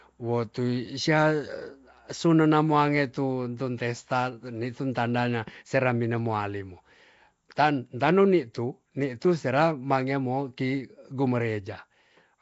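Nellymoser compression runs through the whole clip. The speech has a rough, hissy halo, a smeared underwater quality, and nothing above 7.7 kHz. This likely comes from Flash's Nellymoser Asao codec, which starved weak bands and filled them with noise, consistent with a 32 kbps stream.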